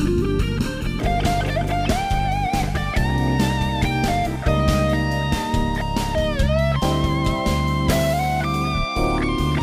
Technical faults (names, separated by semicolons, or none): channel delay (comb filtering)